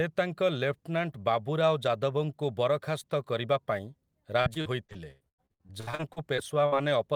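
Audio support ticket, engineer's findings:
Repeated packet loss (robotic sound), 4.41 to 6.75 s. Network/jitter buffer: packets lost or late again and again; concealment stretches the last fragment over each hole before the next loss hits. Sixteen gaps, longest 98 ms, about 29% of that span concealed, 683 ms filled and 720 ms missing. Audible result: choppy speech with chunks dropped out.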